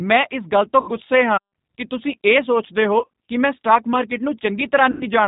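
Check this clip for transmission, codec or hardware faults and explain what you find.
Two faults are present in this speech recording: low-bitrate codec coding throughout, and three bursts of packet loss covered by the decoder.

G.729 codec, throughout: the 8 kbit/s model rebuilds the voice from a filter, pitch predictor and sparse pulses, so nothing above 4 kHz survives and the voice sounds rough and synthetic. Unlike simple band-limiting, the roughness lies in the voice itself.

VoIP packet loss concealed by the speech codec, at 0.81–0.92 s after "ਇਸ ਗੱਲ ਤੋਂ", at 2.99–3.08 s between "ਕਿ ਤੁਸੀਂ ਇਹ ਸੋਚਦੇ" and "ਕਿ ਮੈਂ ਸਟਾਕ ਮਾਰਕੀਟ", and at 4.91–5.07 s. The decoder repeats its last pitch and filter at falling gain, giving a fading buzzy smear rather than the clean silent gap of a dropout. The middle burst consists of scattered losses spread over about 180 ms.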